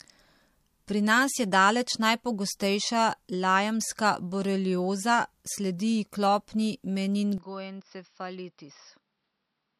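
At 7.38 s the speech suddenly goes duller and a few dB quieter, with nothing above 5.7 kHz and a faint new background noise well below it, right through to the end. There's no gap at the change, so it's likely an input switched to a poorer device.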